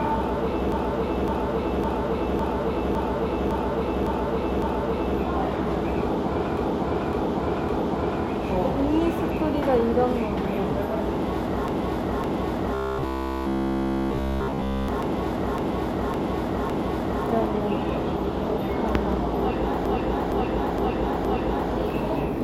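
From 0.72 to 5.18 s the sound stutters, a 557.3 ms stretch replaying eight extra times. These are repeated frames: a run of compressed frames, which fits six frames, was delivered again, adding about 4.5 s. A 557.3 ms loop also appears from 6.57 to 8.25 s with three extra plays and from 11.68 to 17.25 s with ten.

Inside that last stutter, from 12.74 to 14.88 s, the audio turns into a rigid metallic buzz at 66.8 Hz throughout. This is robotic sound from repeated short buffers, likely caused by the last 15 ms of audio being replayed while new data failed to arrive.

From 19.86 to 21.71 s a shorter 464.4 ms loop stutters through four extra plays, again from repeated frames.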